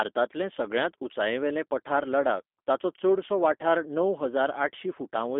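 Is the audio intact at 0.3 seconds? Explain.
No. At 0.3 s the speech is already passing through G.729 coding, which runs for the whole clip. This 8 kbit/s codec rebuilds each 10 ms frame from a vocal tract filter, a pitch predictor and a few pulses, so the waveform is not preserved. Here the damage is plainly audible: a slightly rough, synthetic quality, with the sound confined to roughly 250 Hz to 3.6 kHz and nothing above 3.7 kHz.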